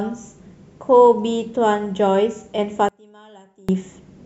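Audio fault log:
2.89–3.69 s, one channel inverted: speech drops about 28 dB to a faint residue rather than silence, likely from reversed polarity cancelling centred content when summed to mono.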